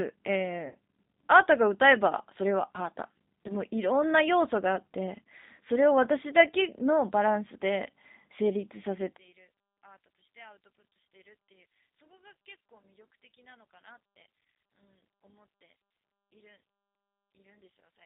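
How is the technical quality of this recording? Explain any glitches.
The recording is speech carried over a narrowband VoIP link, with codec damage that is plainly audible throughout, three short dropouts, and a large level collapse in its second half.

G.729 codec, entire clip: the audio passes through a G.729A coder at 8 kbit/s, which rebuilds speech from a vocal tract filter, a pitch predictor and sparse pulses rather than the waveform itself. The band sits between 200 Hz and 3.7 kHz, and the speech has a rough, synthetic texture.

VoIP packet loss concealed by the speech codec, at 0.68 to 0.75 s, 3.48 to 3.56 s, and 10.81 s: packets went missing, and the decoder extended its last pitch and filter settings while reducing the gain. The first gap is about 70 ms, which fits seven lost 10 ms frames, and is stretched into a buzzy tone or coloured noise that fades. The other two losses are about 10 ms each. 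Because each frame depends on the one before, the sound around 3.5 s stays disturbed beyond the lost packet itself.

One channel inverted, 9.17 s to the end: the level drops by about 26 dB and stays there, leaving a faint residue of the speech. The likely cause is reversed polarity on one channel of a stereo source, so that summing to mono cancelled the shared content.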